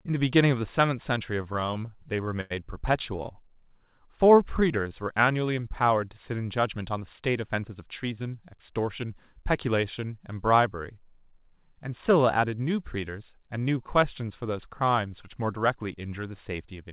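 From 1.42 to 2.52 s the audio shows repeated stalls (stutter): thirteen brief dropouts where packets arrived late and the jitter buffer ran dry. The receiver extended the last sound to cover each wait, the longest about 95 ms, so about a fifth of that stretch is concealment. Nothing is lost, but delivery drags and catches. A second, milder burst follows from 3.02 to 3.52 s, with eight shorter gaps of at most 14 ms.

From 3.78 to 5.14 s a jitter buffer slow-down follows. To rebuild its reserve, the receiver repeated individual pitch periods and pause fragments, adding 114 ms. Playback runs at 92% speed with unchanged pitch, so sounds are drawn out.

From 7.19 to 8.43 s the opposite happens, a jitter buffer speed-up. Excess buffered audio was trimmed by cutting short pitch-period pieces, roughly a tenth of a second in total. Playback runs at 108% speed at the same pitch and sounds hurried.

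Throughout, the call path is band-limited with nothing above 4 kHz, consistent with a G.711 mu-law telephone codec.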